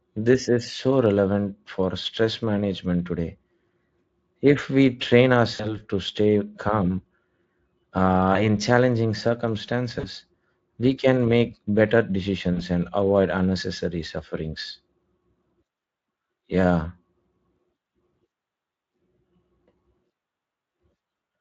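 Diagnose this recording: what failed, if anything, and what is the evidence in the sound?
Brief buzzy or noisy smears that fade out at 5.55–5.78, 8.33–8.44, 9.99–10.08 and 12.53–12.64 s point to network VoIP packet loss, concealed by the Speex decoder extrapolating across 20–40 ms gaps.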